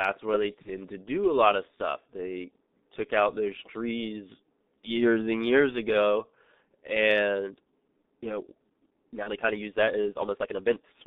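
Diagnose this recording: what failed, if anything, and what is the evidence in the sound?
The speech is muffled and hoarse throughout, with soft, smeared consonants and nothing audible above roughly 3.7 kHz or below about 200 Hz. This is the G.723.1 codec at the codec stage, running at 6.3 kbit/s over a telephone-band line. Its 30 ms frames and slowly updated voice model can't follow fast spectral changes, so the coding damage is heavy. Fricatives and plosives blur into the vowels around them.

Two short dropouts come from VoIP packet loss concealed by the speech codec, at the network stage. The first runs from 0.62 to 0.69 s, between "where they" and "to do a lot". The second runs from 9.23 to 9.30 s. Each gap is filled with a brief buzzy or noisy smear that fades, and each fits one lost 30 ms frame. The decoder filled the gap by repeating its last pitch and filter at falling gain, and the voice sounds thin for a moment after each gap.

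From 7.31 s to the end, the pace jumps abruptly to about 1.49 times normal speed while the pitch stays the same. The delivery sounds rushed. This is a time-stretched section, likely added in post-processing or storage to fit the audio into a set length. Short segments were dropped to shorten it without shifting the pitch.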